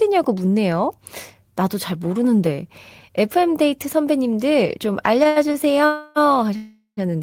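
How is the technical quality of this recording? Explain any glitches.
The quality is marred by a cluster of timing glitches between 5.2 and 7.0 s. Delayed packets repeatedly emptied the receiver's buffer, holding up the speech and pushing it later.

Short stalls from late packets occur at 5.23 to 5.27 s, 5.27 to 5.38 s and 5.52 to 5.56 s. Each time a packet arrived late, the receiver stretched the last sound for 16, 89 and 21 ms, then resumed. Nothing is lost, but a sound is briefly held with a faint buzz or dip.

Call audio freezes follow at 5.86 to 6.18 s and 6.56 to 6.99 s, likely caused by packets held up in transit. The last sound is extended as a fading buzz or hiss for about 0.3 and 0.4 s, the second trailing into 110 ms of silence, before the speech picks up where it stopped.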